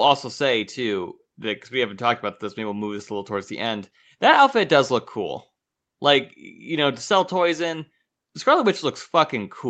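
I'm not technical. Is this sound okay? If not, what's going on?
Yes, it's fine: the speech has simply gone through a call's usual microphone processing, which trims away the deepest bass and leaves nothing above about 8 kHz, and that's normal for a phone or video call.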